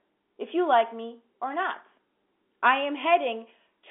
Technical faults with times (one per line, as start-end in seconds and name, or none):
none